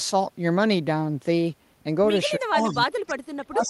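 From 2.38 to 2.77 s there is an echo leak: a faint, delayed copy of the speech trails the original by 312 ms, sitting roughly 25 dB below it. The likely cause is a loudspeaker-side echo canceller that did not fully remove what its microphone picked up, letting residual echo travel back. On a spectrogram, the harmonic pattern of the speech reappears shifted about a third of a second later, much fainter.

Overlapping this, from 2.45 s to the end at 3.69 s, the speech is suppressed in double talk. The talker's level sinks, at its deepest by around 30 dB. This is likely an echo canceller that could not separate the near talker from the loudspeaker echo while both were active, so it attenuated everything. The waveform envelope and the spectrogram both show the speech dimming.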